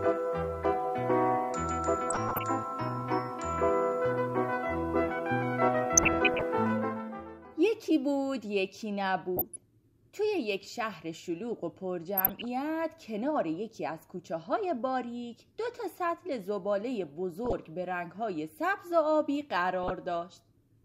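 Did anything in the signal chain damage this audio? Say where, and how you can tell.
Yes. Short noise blips surface over the audio at 2.10–2.43, 5.97–6.43, 9.37–9.62, 12.17–12.45, 17.45–17.53 and 19.83–19.91 s. This is DAB burbling from weak reception: bit errors at a fraction of a percent slip past error correction, corrupting MP2 samples and scale factors, so single sub-bands get noise blips and sub-bands jump in level for up to a frame.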